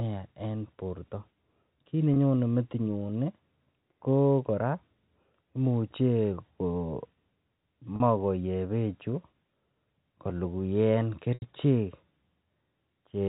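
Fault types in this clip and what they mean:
Packet loss with pitch repetition: Three dropouts of 20, 40 and 80 ms are filled by repeating the last pitch period. The two shorter ones sound like a brief, buzzy held tone; the 80 ms one fades into silence before the speech returns with a short cross-fade.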